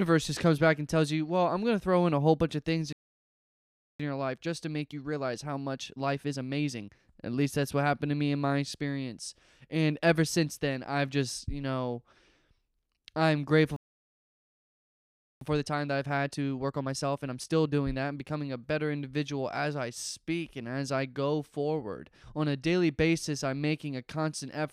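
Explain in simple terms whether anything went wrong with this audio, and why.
Playback stalls at 2.93 to 4.0 s, just after "whole bunch of things", and at 13.76 to 15.41 s: the speech cuts to silence for about 1.1 s, then 1.6 s. The player likely ran out of incoming data or was briefly blocked, so nothing reached the output until it recovered.

Time-compressed catch-up follows each stall, from 4.0 to 7.0 s and from 15.41 to 18.41 s, between "I'm grateful" and "a better individual as". To make up lost ground, the player trims and blends tiny slices, so speech runs 1.25 times faster at normal pitch.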